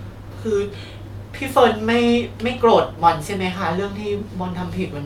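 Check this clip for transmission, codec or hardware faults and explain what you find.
Nothing stood out on listening to the speech in this clip.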